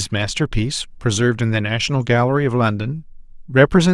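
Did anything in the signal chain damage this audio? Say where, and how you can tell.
No, nothing in the chain damaged it.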